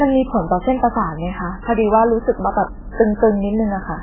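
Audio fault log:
Throughout, MP3 compression: nothing above 3.2 kHz, with watery swirl and smeared onsets unlike simple filtering, likely from a bitrate around 8 kbps.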